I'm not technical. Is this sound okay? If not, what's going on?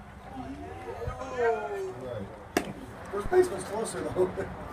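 No. At about 3.26 seconds there is a phantom power thump, a short, deep thud that is over by about 3.34 seconds, dying away in about 19 milliseconds. It happens when the power feeding a microphone is switched on or off while the input is live, and that sudden jump in voltage comes through as a low bump. Unlike someone knocking the microphone, it is a single thud caused by the power switching.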